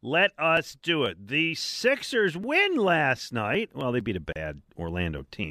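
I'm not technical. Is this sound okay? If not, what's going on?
No. From about 1.06 s to 5.18 s there's a click roughly every 1.38 s, about four in all. These are clock drift buffer slips, likely from two devices keeping slightly different time. Unlike random crackle, the clicks come at a steady, regular beat.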